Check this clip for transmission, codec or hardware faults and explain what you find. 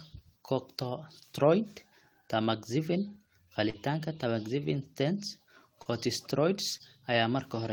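Three short concealed packet loss events are audible in this speech. At 3.69–3.76 s, 5.82–5.87 s and 6.77–6.81 s the sound briefly smears or wobbles. About 40, 40 and 20 ms of audio arrived too late, and the receiver bridged each gap by extending the preceding sound before blending back.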